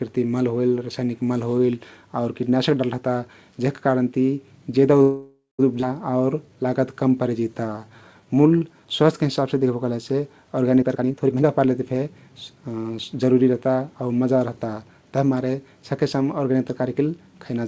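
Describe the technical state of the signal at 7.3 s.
At 7.3 s the speech is in the middle of a jitter buffer slow-down running from 6.11 to 9.24 s. The receiver's buffer was running low or had just raised its target delay, so it repeated single pitch periods and fragments of pauses to build a reserve, stretching the stretch by 376 ms and playing it at about 88% speed. Sounds drag and may warble slightly, but the pitch stays put. That steady pitch separates it from a playback-rate slowdown, which would also lower the pitch. The band stops at 8 kHz, as expected from a G.722 call codec.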